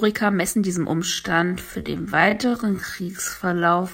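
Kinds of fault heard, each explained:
Time-stretched section: from 1.0 s to the end, the speech suddenly runs at about 0.56 times its earlier pace while its pitch stays the same. The likely cause is software lengthening this part by repeating short pieces of the sound. A simple playback slowdown or sample-rate mismatch would also lower the pitch. Here only the timing changes, abruptly, partway through.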